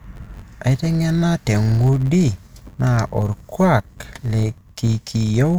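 A filter restarted on every block runs through the whole clip: the filter discards its internal state at each block boundary and begins processing from silence, so every block opens with a small transient. Those transients repeat 93.8 times per second, which fits a 512-sample buffer, and they fuse into a steady buzz under the speech that rises and falls with the speech's level.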